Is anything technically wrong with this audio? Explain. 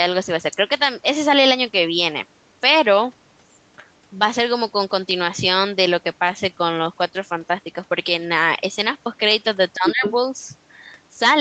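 Yes, there are three faults.

At 5.11 s, dropped samples: a fraction of a millisecond of the stream is likely missing, so the waveform jumps straight to a later value. That discontinuity is heard as one sharp, isolated click, with no sound audibly lost.

From 9.74 to 10.03 s, speech suppressed in double talk: the echo canceller, likely confused by both sides talking at once, turns the talker down along with the echo. For roughly a fifth of a second the voice dips by around 25 dB at its deepest.

From 9.86 to 10.12 s, the other side's voice leaks through: sound from the talker's own loudspeaker was likely not fully cancelled at the microphone. A second voice comes through at about the talker's own level, overlapping the dip and continuing just past it.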